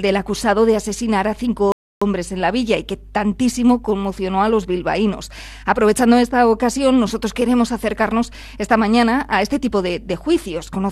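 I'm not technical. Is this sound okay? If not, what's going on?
No. First, there is mains hum: electricity from the power supply leaked into the recording, probably through a grounding problem or nearby transformer. You hear it as a steady low buzz at 50 Hz running under the whole clip, fairly noticeable.

Second, a rebuffering stall: the player ran out of downloaded audio at 1.72 s and waited for more. The sound drops to silence until 2.02 s, then carries on exactly where it stopped, so nothing is missing, just a short pause added.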